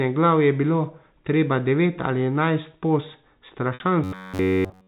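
Speech heard through a 4 kHz telephone band shows two faults near its end. At 3.74 to 3.80 s there is packet loss with pitch repetition: about 60 ms of audio went missing, which fits three 20 ms packets, and the receiver bridged the hole by looping the last pitch period, so the sound briefly holds on a slightly buzzy, frozen tone before the real signal resumes. On a spectrogram the harmonics run as flat, unchanging horizontal lines across that span, fading slightly. The waveform shows identical cycles repeated back to back. From 4.04 s to the end at 4.87 s comes a robotic sound from repeated short buffers. The whole stretch turns into a rigid metallic buzz at 93.8 Hz, which fits a buffer of about 10.7 ms being replayed over and over, likely because fresh audio was arriving too seldom and the playback skipped ahead. A spectrogram shows an evenly spaced comb of harmonics at that 93.8 Hz spacing, and the waveform shows a strictly periodic pattern.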